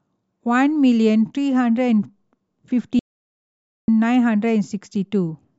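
Audio dropout to silence from 2.99 to 3.88 s in this speech recording: 0.89 s of total silence with no room tone, likely from input lost while recording continued.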